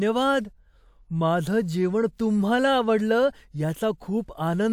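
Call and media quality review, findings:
No call or media quality faults found in this speech clip.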